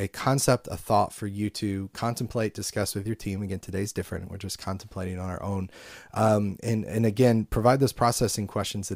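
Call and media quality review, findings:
No audible faults found in the speech clip; nothing to raise against any component.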